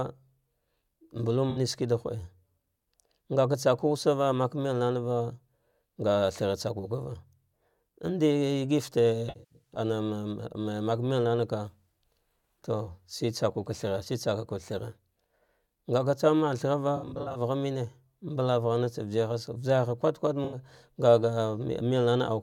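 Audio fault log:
1.50–1.59 s, 9.29–9.79 s, 16.96–17.41 s, 20.44–20.58 s: AAC frame loss with concealment. The decoder rebuilds the missing frames from the last good spectrum, which leaves smeared, noisy patches. The losses before "shiki da" and at 20.44 s are single short ones. The gap after "thara va" and the one at 9.3 s are scattered, with the longest runs at roughly 70 ms and 100 ms.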